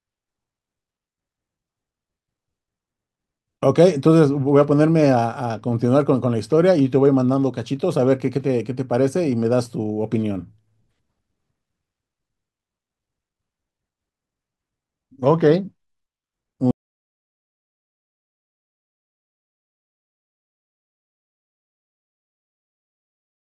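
At 16.71 s the speech just stops dead, and from there to the end of the clip it's an audio dropout to silence: pure silence for the last 6.7 seconds or so, with no room tone or hiss underneath. That flat nothing is the giveaway. The likely cause is the input going away, whether a device unplugged, a link failing or a mute getting hit, while the recorder kept writing. Whatever came after that point is lost.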